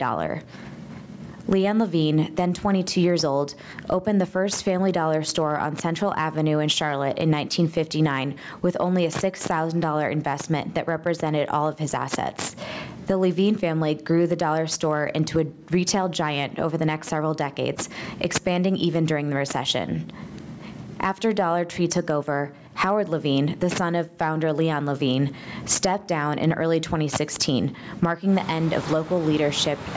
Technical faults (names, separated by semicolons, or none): gain pumping